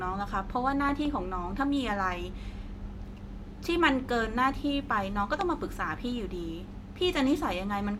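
A speech clip with two loud pops sitting on top of the talking, which carries on underneath both times. The first is a quick double pop between 0.89 and 1.07 s, peaking about 10 dB above the speech; the second is a single, louder hit at 5.41 to 5.43 s, roughly 15 dB up. That's a brief voltage spike getting into the chain, likely from a plug, switch, static discharge or a driver glitch.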